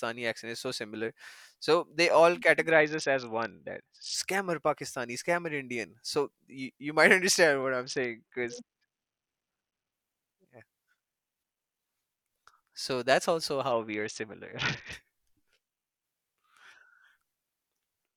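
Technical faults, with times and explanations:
2.71–4.14 s (after "similar so they all"), 7.84–9.92 s (after "understand what") and 13.71–14.93 s (after "so that's also"), Bluetooth SBC bit pool drop: the speech suddenly turns dull and muffled, with a gritty, rough noise riding on it, then clears. The link appears congested, so the encoder fell back to a very low bit pool, which fits a drop to roughly 60 kbps. The highest sub-bands were starved of bits and the remaining ones coarsely quantised.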